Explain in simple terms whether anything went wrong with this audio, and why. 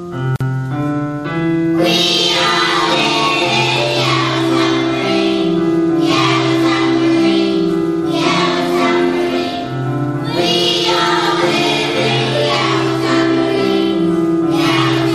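There's a gap at a join of encoded pieces near the start, from about 0.36 to 0.41 s. The sound briefly drops out for roughly 46 ms, then picks up where it left off. Two separately encoded chunks were stuck together with their built-in padding silence left in.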